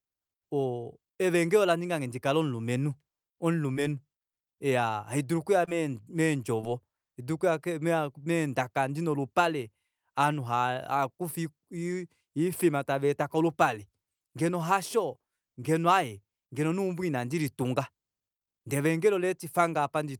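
At 3.73 to 3.77 s, 5.65 to 5.69 s and 6.61 to 6.65 s the speech shows short concealed packet loss. Each time about 20 ms of audio arrived too late, and the decoder papered over it by extending the preceding sound for roughly 15 to 22 ms before crossfading back. The result is a brief smear or wobble, not the hard silence of a dropout or the sharp edge of a click.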